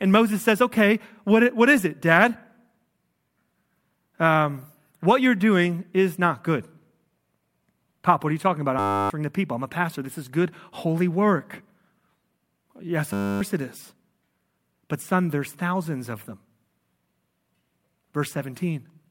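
After "are you talking about", from 8.79 to 9.1 s, and again at 13.13 to 13.41 s before "it is", a system hang loop repeats one 10 ms slice about thirty times. The result is a steady 100 Hz buzz, not silence or a stutter, and roughly a third of a second of speech is lost each time.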